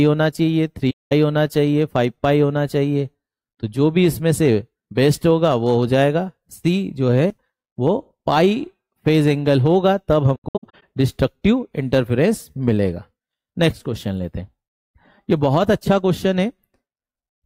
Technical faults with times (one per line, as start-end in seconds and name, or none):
0.90-1.12 AAC frame loss with muting
10.35-10.83 AAC frame loss with muting